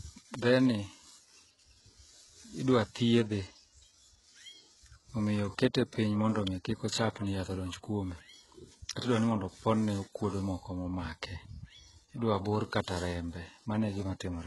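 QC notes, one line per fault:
throughout: HE-AAC compression, likely. The treble up to the 11.5 kHz ceiling is rebuilt from copied lower bands, so s sounds come out gritty and lispy and the top end has that metallic sheen. The heavy damage suggests a bitrate somewhere around 12 kbps.
0.34 s and 6.47 s: electrical switching spike, likely. Each is a sharp, very short snap sitting on top of the speech, the second one just before "kik ochapni yath odonj". They sound like an arc from a nearby switch or static discharge getting into the line.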